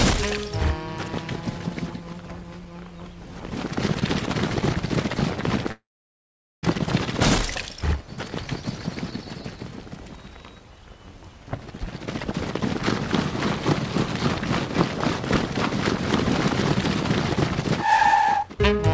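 A call audio freeze runs from 5.72 to 6.65 s. The last sound carries on briefly as a fading buzz or hiss, then about 0.81 s of silence follows before the audio resumes where it stopped. Nothing is lost, but roughly 0.91 s of delay is added, likely because packets were held up and the jitter buffer ran dry.

A jitter buffer speed-up follows from 17.86 to 18.79 s. With more audio queued than it wanted, the receiver cut repeated pitch-period-sized slices, about a fifth of a second in total. The sound plays at 126% speed with unchanged pitch and feels rushed. Throughout, the call codec leaves nothing above 8 kHz, which fits G.722 at 64 kbps.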